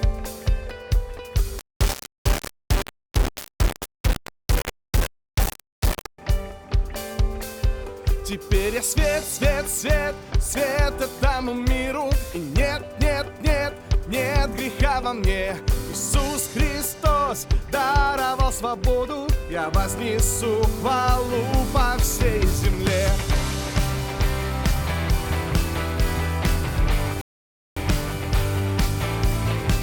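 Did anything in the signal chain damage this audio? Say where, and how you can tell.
Yes. From 1.59 to 6.18 s, grainy distortion tracks the sound, barely 10 dB down. This is low bit depth without dither, likely a rounding to about 3 bits during sample-format conversion.

At 27.21 s, playback stops for 0.55 s, then resumes exactly where it left off. This rebuffering stall means the player's buffer ran dry and added time without losing audio.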